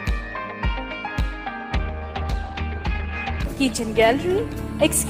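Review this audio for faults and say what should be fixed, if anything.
Call bitrate drop from 1.78 s to 4.51 s. The sound turns coarser and duller as the encoder's bit budget shrinks. The call's bandwidth estimate fell, so the encoder was told to spend far fewer bits. It then quantises more roughly and trims the high frequencies. The degradation fits a fall from 32 kbps to around 14 kbps, held at its worst for 1.67 s before quality recovers. To prevent it, give the call a steadier network path or raise the minimum bitrate floor so the encoder isn't starved.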